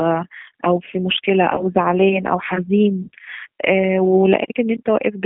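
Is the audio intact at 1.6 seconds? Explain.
No. Between 1.56 and 1.63 s, audio went missing, which fits a single 20 ms packet dropped on the call's path. This is VoIP packet loss concealed by the speech codec: with no new data, the decoder carried its last pitch and vocal tract filter forward at falling gain. The gap is heard as a brief stretch of the preceding sound turned into a buzzy tone or coloured noise, and because each frame builds on the one before, the voice stays weakened a little past 1.6 s before recovering.

Underneath that, the whole clip passes through the G.729 codec at 8 kbit/s. It rebuilds speech from a pitch predictor, a vocal tract filter and a few pulses per subframe, and the line keeps only roughly 150 Hz to 3.4 kHz. At 1.6 s the voice sounds narrow, muffled on top and plainly rough and synthetic.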